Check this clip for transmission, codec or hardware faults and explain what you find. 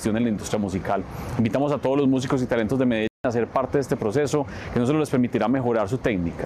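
One transmission fault is present: a digital broadcast dropout from 3.07 s to 3.25 s. The receiver stopped getting decodable frames, either because the signal was lost or because frames failed their error check, so it muted output until valid data resumed. The sound cuts to silence for roughly 170 ms and then returns further along in the programme. The material that should have filled the gap is gone, and the length of the hole fits about seven lost frames.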